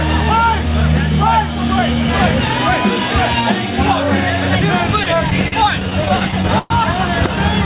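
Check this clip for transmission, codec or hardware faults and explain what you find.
There is one transmission fault, repeated stalls (stutter), from 5.04 to 6.72 s. Packets arrived late, so the jitter buffer repeatedly ran dry and the receiver stretched the last sound across 17 gaps, the longest 118 ms, making the audio drag and stutter without losing anything. The call path's band-limiting is audible too, with nothing above 4 kHz, which fits G.711 A-law.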